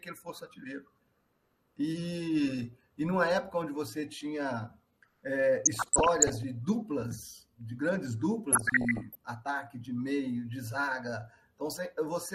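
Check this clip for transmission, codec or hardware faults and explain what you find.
Two faults can be heard: dull, granular coding damage across the whole clip, and two short bursts of DAB burbling.

The MP2 compression runs throughout. The top end sounds cut off, and the remaining detail has a gurgling, grainy roughness. The likely cause is MPEG Layer II coding at a low rate, plausibly around 80 kbps. Too few bits were shared among its 32 sub-bands, so the upper bands drop out and the lower ones are coarsely quantised. On a spectrogram this appears as a hard ceiling with flickering, blocky patches above it.

The DAB burbling runs from 5.65 to 6.44 s and again from 8.52 to 9.15 s. Over both stretches the sound breaks into short blips of noise in single bands. Weak reception let bit errors, at a rate under one percent, slip past error correction into the MP2 data. Corrupted samples then put short bursts of noise into individual sub-bands. 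A spectrogram shows isolated band-shaped flashes in those windows, and the waveform shows ragged, uneven bursts.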